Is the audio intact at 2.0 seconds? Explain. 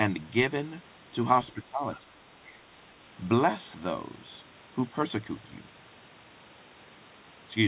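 No. From 1.53 to 2.13 s the speech is suppressed in double talk: the level sinks in patches, with the deepest drop around 10 dB and a bit under half a second affected in total. The likely cause is the echo canceller hearing both sides at once and, unable to separate the local talker from loudspeaker echo, turning everything down.

Inside that window, from 1.95 to 1.99 s, the other side's voice leaks through as a brief scrap, far below the talker at around 25 dB down. This is likely echo from the device's loudspeaker that the canceller failed to remove from the microphone. It sounds like a faint second voice, not a loss of the talker's own sound. That distinguishes it from the suppression around it, which weakens the talker rather than adding anything.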